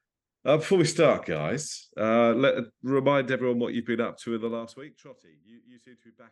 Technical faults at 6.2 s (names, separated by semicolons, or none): none